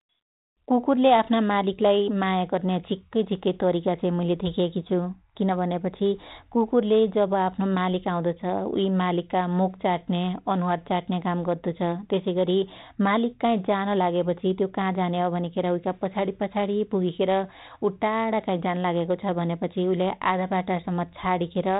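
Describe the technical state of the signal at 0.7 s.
At 0.7 s the speech is intact, carried in the narrow telephone band of 32 kbit/s G.726 ADPCM with no fault present at that moment.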